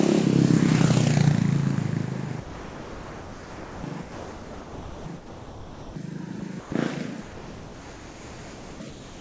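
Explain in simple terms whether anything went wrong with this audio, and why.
Sound dropped by the voice detector, at 2.40–3.84, 4.02–5.06, 5.16–5.96, 6.40–6.42, 6.60–6.72, 7.22–8.80 and 8.90–9.21 s: the sound cuts to steady background hiss, likely because the sender's detector mistook it for background and stopped sending.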